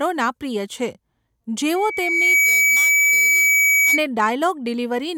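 From 1.75 s to 4.04 s, loudspeaker feedback squeal rises over the speech: a microphone hears its own loudspeaker, and the loop gain passes one at 2.3 kHz. The tone swells over roughly 0.7 s to about 5 dB above the voice. A spectrogram shows one bright horizontal line.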